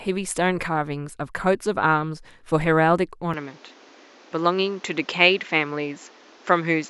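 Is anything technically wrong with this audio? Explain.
Yes. At 3.34 s the recording likely switches to a poorer input device, whose narrower passband stops near 7.6 kHz. From there to the end the speech sounds duller and boxier, with a faint new background noise. There is no gap at the switch, and the level stays about the same.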